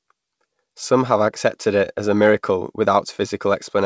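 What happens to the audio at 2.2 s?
Nothing goes wrong at 2.2 s: the speech carries on intact through the G.722 call path, which keeps it within its usual band up to 8 kHz.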